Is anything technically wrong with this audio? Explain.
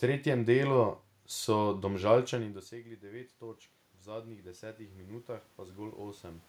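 Yes. From 2.32 s to 6.44 s there is automatic gain rising. Around two and a half seconds the speech level falls by about 18 dB as the talker moves away from the microphone. The gain control reads this as a quiet input and lifts its gain by about 9 dB over roughly four seconds, so the speech and the room noise swell together. On a waveform the envelope drops and then slowly widens again. On a spectrogram the noise floor brightens steadily across all frequencies.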